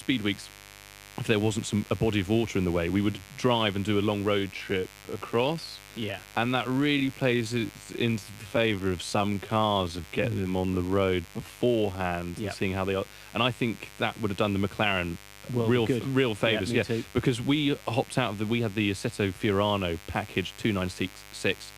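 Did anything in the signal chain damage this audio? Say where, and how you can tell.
Yes. Mains buzz runs through the whole clip, entering in the analogue wiring: a steady, raspy 50 Hz buzz sits about 20 dB below the speech. Sharp switching spikes, twice per mains cycle, spray harmonics into the kilohertz range, which is what makes it rasp.

A time-stretched section runs from 4.36 to 12.38 s. The speech abruptly slows to about 0.68 times its pace while pitch stays put. This was likely editing software lengthening the audio by repeating short slices.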